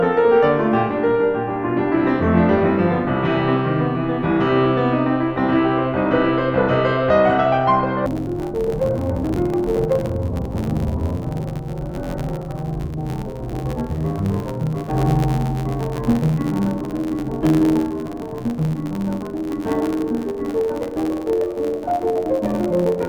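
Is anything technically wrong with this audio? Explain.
Yes. From 8.06 s to the end, the music suffers from interleaved audio read as planar: each 11.61 ms block, which fits a 512-sample buffer, is split into halves assigned to separate channels. This makes the sound dull and robotic, with an 86.1 Hz buzz and no clear octave drop.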